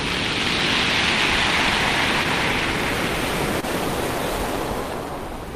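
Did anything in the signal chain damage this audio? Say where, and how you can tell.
Yes, at the network stage. A short stall from a late packet hits at 3.61 s, lasting until 3.65 s. The sound holds slightly too long, with a slight buzz or dip. The jitter buffer ran dry, so the receiver stretched the last sound by 19 ms. Nothing is lost.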